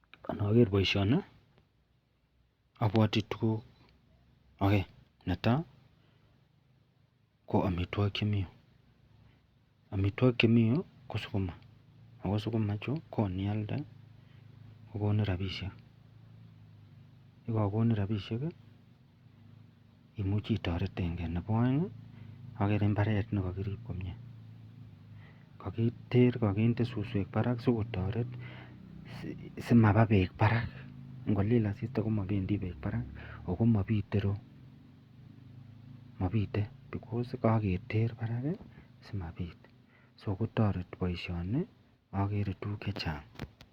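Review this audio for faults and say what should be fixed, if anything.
From 28.80 to 32.80 s the adaptive stream drops to a lower bitrate. Quality shifts suddenly, with no gap. Codec artefacts rise, consistent with Opus falling from 64 to 32 kbit/s. A deeper playback buffer or a higher bitrate floor would ride out the slow connection.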